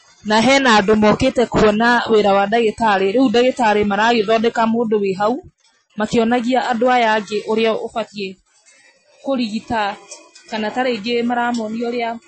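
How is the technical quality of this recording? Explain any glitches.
The recording has one fault, present throughout: the speech sounds watery and swirly, with dull treble that stops near 8.3 kHz and chirpy, metallic s sounds. This is likely MP3 compression at a low bitrate, around 32 kbps, cutting the treble and switching weak frequency lines on and off.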